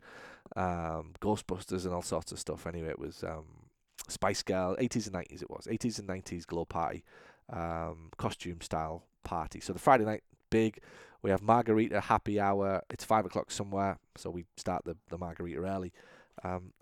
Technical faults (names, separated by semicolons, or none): loud pop